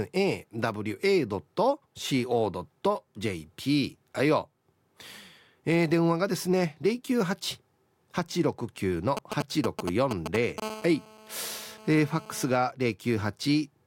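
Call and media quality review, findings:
GSM signalling bursts, 9.17–10.6 s: galloping tick groups and short 217 Hz buzzes, nearly as loud as speech. A nearby 2G phone is signalling, and the audio circuit rectifies the pulses. The buzz is grouped, not continuous.

GSM phone buzz, 10.62–12.57 s: steady, raspy 217 Hz buzz, rich in harmonics, about 17 dB below speech. A nearby 2G phone is now in a call. Its 217 Hz fundamental rules out mains hum at 50 or 60 Hz.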